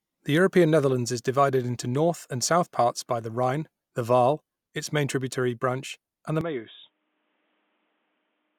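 From 6.41 s to the end, the speech turns dull and boxy with nothing above 3.8 kHz, drops somewhat in level and gains faint new background noise, likely an input switched to a poorer device.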